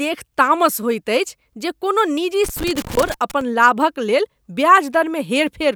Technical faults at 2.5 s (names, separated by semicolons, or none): loose connector crackle